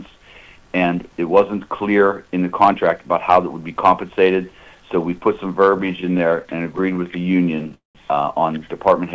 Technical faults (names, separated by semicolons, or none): repeated stalls (stutter); call audio freeze